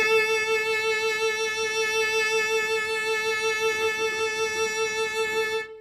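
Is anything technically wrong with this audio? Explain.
Yes. Throughout this music clip the treble has a gritty, metallic quality, and the top end is gone entirely above about 15.4 kHz. This is likely HE-AAC compression at a low bitrate, around 24 kbps. The codec codes only the lower spectrum and rebuilds the highs by copying bands upward, so the harmonics don't align. On a spectrogram the upper bands look like blocky, repeated copies of lower ones, ending at a hard ceiling.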